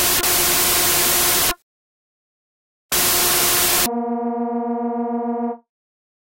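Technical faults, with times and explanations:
0.00–3.86 s, wrong sample width: Audio written as 16-bit integers is read as packed 24-bit integers. Most values splice bytes from neighbouring samples, so loud noise swamps the sound. The surviving sound is running 1.5 times too fast and raised in pitch.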